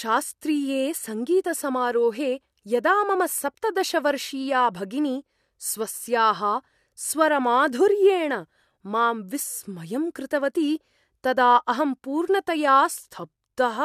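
No technical faults can be heard anywhere in this speech recording. The sound stays continuous and steady throughout, with no moment that marks a problem.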